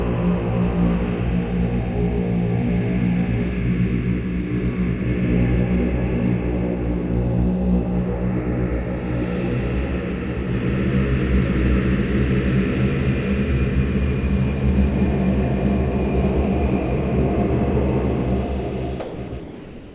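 From 19.0 to 19.18 s, 19.28 to 19.32 s and 19.4 s to the end, the sound gives way to steady comfort noise. It is likely sound dropped by the voice detector.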